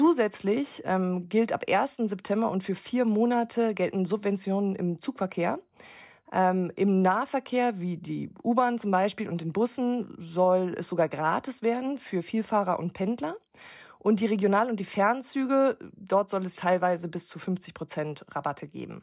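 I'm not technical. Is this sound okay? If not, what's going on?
Yes, nothing stood out as wrong when listening to this recording.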